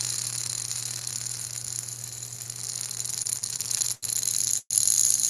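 From 3.23 to 4.04 s and again from 4.44 to 4.72 s, repeated stalls (stutter): late packets repeatedly emptied the jitter buffer, so the sound was stretched, with gaps up to 111 ms. On a spectrogram, these show as smeared, repeated slices.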